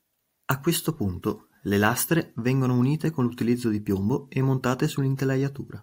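Speech recording with no technical faults audible anywhere.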